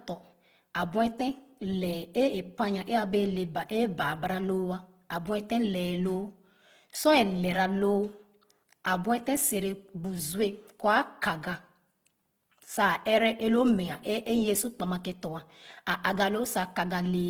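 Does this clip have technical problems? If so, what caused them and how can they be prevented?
Yes. Opus compression throughout: the speech turns rough and grainy, likely from CELT mode filling starved bands with folded energy or noise, consistent with roughly 16 kbps. Encoding at a higher bitrate would prevent this graininess.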